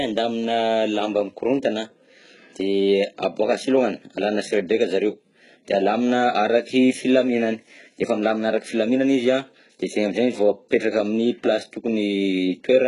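Throughout the speech, the audio was likely passed through HE-AAC compression, heavily, at a bitrate that sounds around 12 kbps. The treble is rebuilt from copied lower bands instead of being coded, so s sounds turn gritty and metallic, and nothing remains above 11.1 kHz.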